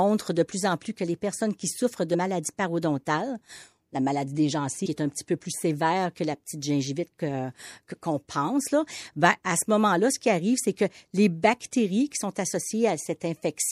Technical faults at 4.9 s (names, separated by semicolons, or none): MP3 compression; compressed frames skipped